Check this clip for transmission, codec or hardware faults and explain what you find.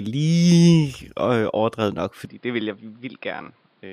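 One fault: from 2.25 s, right after "overdrevet nok", the speech goes dull with nothing above 5.2 kHz, drops about 10 dB and picks up faint new background noise. That's likely the input switched to a poorer device, a narrower-band mic with its own noise floor.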